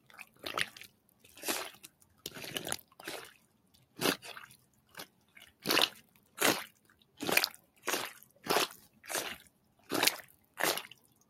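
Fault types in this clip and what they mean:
noise suppressor applied to music or sounds: A speech-oriented noise suppressor stayed active on this everyday audio. It treats steady sound as noise. Level swings of roughly 15 dB result, so held sound pumps and thins while attacks pass.
sound cut by the noise suppressor: Here the suppressor pulled specific stretches down, by up to about 9 dB. Drops fall at 0 to 1.24 s, 1.85 to 2.25 s, 2.83 to 3.98 s and 4.57 s to the end. Sustained parts sink.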